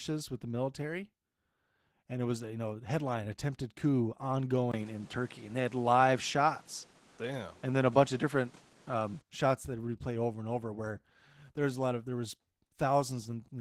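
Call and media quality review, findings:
Opus voice compression, whole clip: speech hoarse and faintly robotic, plainly audible. Sounds like roughly 16 kbps hybrid mode, SILK below 8 kHz with a CELT layer on top, 20 ms frames, excitation coded too coarsely to keep the grain clean.

Input switched to a poorer device, 4.72–9.23 s: a 20 ms gap at 4.72 s, then duller sound with nothing above 11.4 kHz, new background noise around 30 dB under the speech, and a level shift of a few dB. Likely an OS input change.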